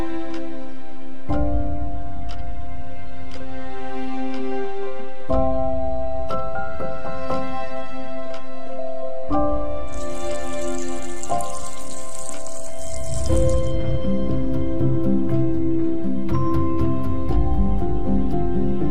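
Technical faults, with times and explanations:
Throughout, DC offset: the entire waveform sits shifted away from zero by a constant amount, at about -16 dBFS. You cannot hear this directly. A fixed shift adds no tone of its own. It shows instead as steady energy at 0 Hz, the very bottom of the spectrum. It also eats headroom, because peaks on one side reach full scale sooner. That raises the risk of clipping and makes level readings misleading.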